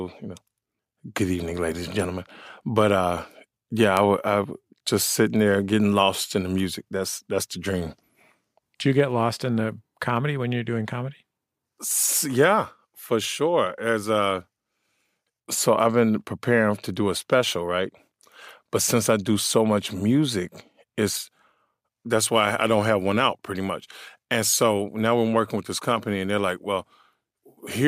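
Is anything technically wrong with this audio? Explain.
Yes. From 1.20 s to 27.58 s, word clock ticks recur about every one and a half seconds. An unlocked digital receiver slips one sample per clock crossing, giving sharp clicks.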